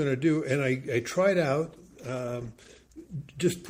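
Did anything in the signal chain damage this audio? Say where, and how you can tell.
Yes. From 1.69 s to 3.25 s the audio turns rough and watery, losing its top end for about 1.5 s. This is a call bitrate drop at the codec: the bandwidth estimate fell, so the encoder coded far more coarsely and cut high frequencies, consistent with roughly 128 kbps falling to 14 kbps.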